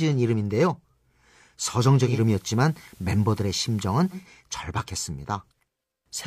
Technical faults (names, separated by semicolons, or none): digital radio blending to analogue